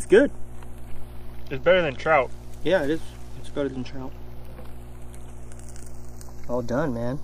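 A ground loop or a nearby transformer is coupling the 60 Hz power line into the signal path, producing mains hum that runs from the very start to the end of the clip. It sits as a steady low drone at 60 Hz with some low harmonics above it, at roughly 15 dB below the wanted signal.

Alongside the hum, the channels drift apart for the whole clip. The left and right channels appear to come from devices on separate clocks, with a mismatch of a few tens of parts per million. The delay between them starts near zero and creeps up to a fraction of a millisecond by the end. In mono, the comb-filter notches slide slowly through the spectrum, giving a gradual flanging sweep.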